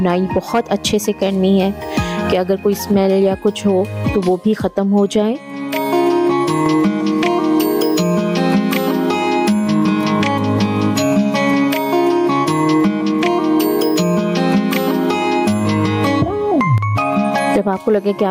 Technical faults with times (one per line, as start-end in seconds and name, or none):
0.00-18.30 gain pumping